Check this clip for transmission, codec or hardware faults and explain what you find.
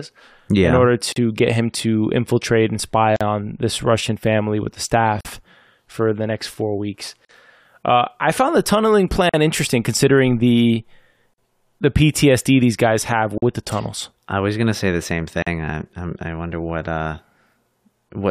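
The speech has a recurring dropout at 1.12, 3.16, 5.21, 7.25, 9.29, 11.34, 13.38 and 15.42 s, one every 2.0 s. Each is a gap at a join of encoded pieces: separately encoded segments were butted together untrimmed, so each segment's encoder delay and last-frame padding leave a silence of about 43 ms (39 ms at the first). On a waveform each is a flat notch with smeared edges; on a spectrogram it is a thin vertical blank stripe, as in the join after "to infiltrate and spy".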